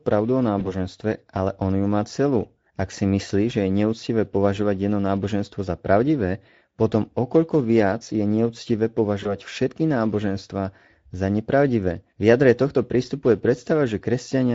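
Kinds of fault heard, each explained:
Speex codec: plainly audible hoarse, noisy coarseness across the whole speech, with thin fill above 4 kHz, from CELP coding at about 16.8 kbps.
VoIP packet loss concealed by the speech codec: brief smears near 0.59 s and 9.23 s, where a lost 20 ms frame was extrapolated and faded before recovering.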